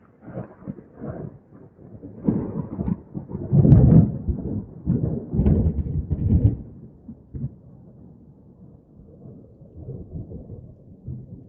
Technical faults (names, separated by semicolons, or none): sound cut by the noise suppressor